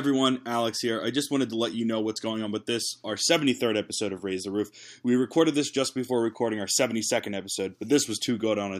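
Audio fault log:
Nothing to log here, as the speech comes across without any technical problems worth noting.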